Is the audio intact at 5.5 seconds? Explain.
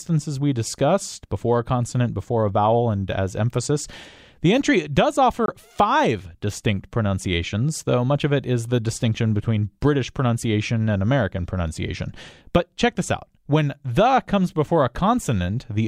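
No, there's a Bluetooth dropout from 5.46 to 5.50 s: the sound cuts to silence, likely a single late packet dropped on the wireless link, then resumes as if it played on.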